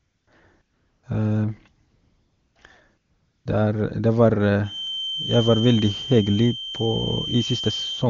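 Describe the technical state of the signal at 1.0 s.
At 1.0 s the signal is AMR comfort noise, spanning 0.61 to 1.03 s: with no speech frames sent for 420 ms, the receiver substitutes smooth, steady synthetic noise for the real background.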